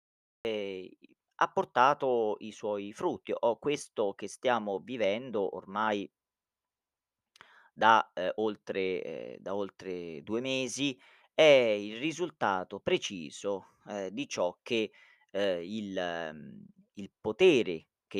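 Cut-off start at 0.45 s in this speech recording: digital silence gives way abruptly mid-sound, with no natural attack, because capture began after the talker had already started.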